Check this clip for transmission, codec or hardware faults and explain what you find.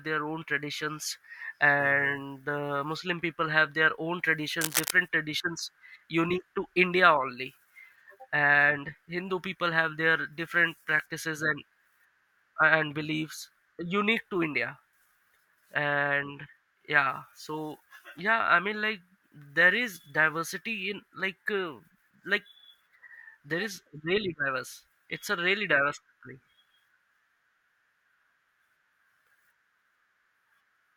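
One hardware fault is present. From 4.61 to 4.91 s, just after "people have their own", a burst of cable scratch noise, dense and uneven and roughly as loud as the speech, rasps across the audio. It likely comes from a worn cable or connector shifting, with its contact resistance fluctuating rapidly.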